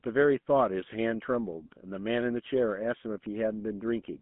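Throughout the clip, the speech carries GSM full-rate codec damage. It is plainly audible. The voice sounds buzzy and gravelly. The codec rebuilds it from sparse pulses, which fits a 13 kbps stream. The band runs from 150 Hz to 3.4 kHz, and nothing passes above 3.8 kHz.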